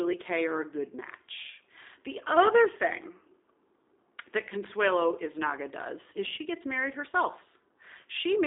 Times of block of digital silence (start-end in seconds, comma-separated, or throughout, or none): none